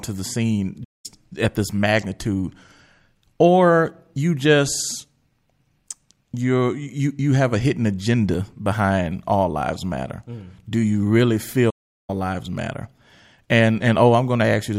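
At 0.84 s, just after "the scene", the speech stops dead for about 0.2 s. It resumes at 1.06 s with "at this magnitude". That is a playback stall. The player most likely ran out of buffered data, so the output fell silent until it caught up. A longer stall follows at 11.70 s, after "do you really". Silence lasts about 0.38 s. The speech picks up at 12.10 s with "lives matter".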